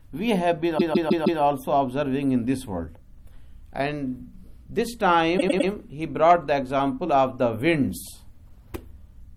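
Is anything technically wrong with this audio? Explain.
Yes. There are repeated frames at two points. From 0.77 to 1.40 s, a 157 ms block plays four extra times, consistent with a run of six frames. From 5.37 to 5.68 s, a 105 ms block repeats three extra times. The decoder received the same compressed frames again, so each passage stutters and the audio runs longer, by about 0.63 s and 0.31 s.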